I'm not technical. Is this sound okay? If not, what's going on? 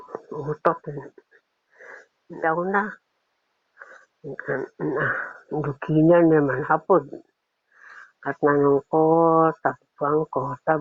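No. A skip ahead happens at about 2.43 to 2.45 s. Roughly a second of sound never made it into playback, so the audio jumps forward and the two sides are joined almost seamlessly, with nothing filling the hole.

Right after, a jitter buffer speed-up runs from 2.57 to 4.98 s, at 7% faster, and again from 5.54 to 7.70 s, at 8% faster. The receiver was holding more sound than it wanted, so it trimmed many tiny slices to catch up. The sound rushes without changing pitch.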